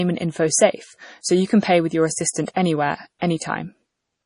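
A starved encoder, likely MP3 compression, runs through the whole clip. Short of bits, it drops the top of the spectrum at a fixed cut-off and lets weak frequency lines flicker on and off between frames. Nothing is heard above 10.5 kHz, and the damage is heavy enough to fit a bitrate near 32 kbps. The speech sounds dull and watery, with a swirling, metallic edge on s sounds and softened consonant onsets.

Pre-echo appears three times where the codec's block-wide quantisation noise spills ahead of a sharp onset. Just after "can pay with your", a short hiss runs from 2.31 to 2.35 s, about 38 ms, then again from 2.45 to 2.48 s, about 27 ms. A third comes from 3.37 to 3.41 s, about 39 ms. Each time, the noise sized for the loud attack fills the quiet gap before it, so the onset arrives smeared and blunted.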